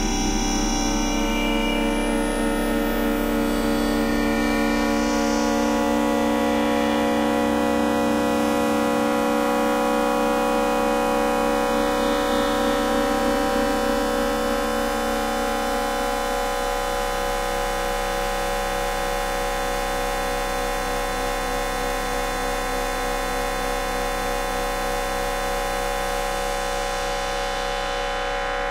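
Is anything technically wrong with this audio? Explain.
No, nothing technically wrong can be heard here.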